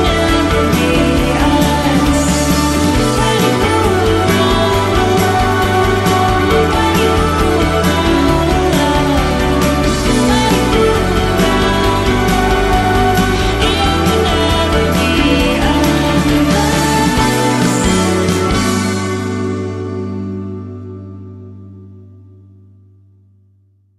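No technical faults can be heard anywhere in the recording; the signal stays steady and intact throughout.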